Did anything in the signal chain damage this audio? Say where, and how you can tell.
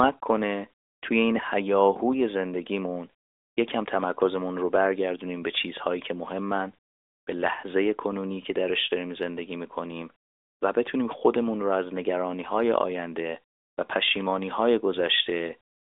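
No, nothing in the chain damaged this speech: it passed through an AMR narrowband mobile codec link at 12.2 kbps, which holds it to the ordinary telephone band of roughly 300 Hz to 3.7 kHz, and that path is working as designed.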